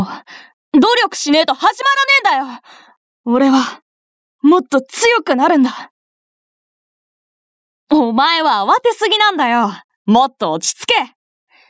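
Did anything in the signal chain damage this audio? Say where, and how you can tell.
Yes. Gain pumping runs throughout: loud and soft parts end up closer in level and the sound is squashed, swinging about 15 dB, likely from excessive input gain driving a fast limiter.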